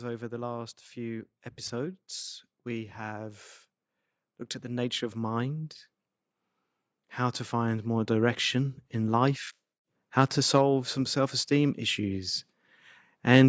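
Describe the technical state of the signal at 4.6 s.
At 4.6 s the signal is intact, with only the normal band-limiting of call microphone processing and no fault present.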